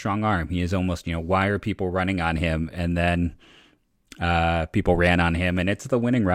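Nothing technically wrong turns up in this short bit of speech, with no faults to point to anywhere in it.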